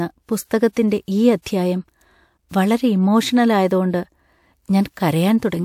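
Right at 0.72 s there's a pre-echo, a short hiss about 42 ms long that creeps in just ahead of a sharp onset in the speech, and it happens again at 1.42 s, lasting around 40 ms. The codec's quantisation noise got spread across the whole transform block, so the quiet stretch before each attack picked up noise meant for the loud part. You hear a brief smear of hiss, and the attack itself lands a bit soft.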